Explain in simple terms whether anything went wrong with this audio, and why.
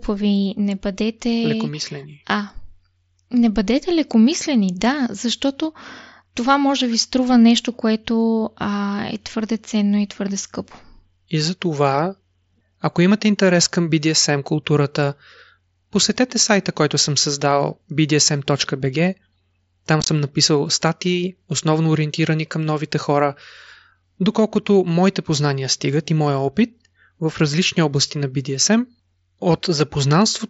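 Something did go wrong, right around 20.0 to 20.08 s: unconcealed Bluetooth headset packet loss. Tiny chunks of speech between the headset and the phone went missing, and nothing filled the gaps, so you hear a short burst of dropouts with sudden edges, about 50 ms lost in all, the longest single gap about 20 ms. The headset's mSBC codec itself comes through as usual.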